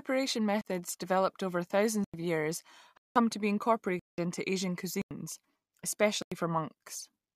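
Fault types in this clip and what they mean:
Block of digital silence: The speech drops to silence six times and comes back abruptly. The output buffer was likely not filled in time, so whole blocks went out empty. The holes last 37 ms at 0.61 s, 93 ms at 2.04, 5.02 and 6.22 s, and 186 ms at 2.97 and 3.99 s. The 93 and 186 ms gaps fit blocks of 4096 and 8192 samples.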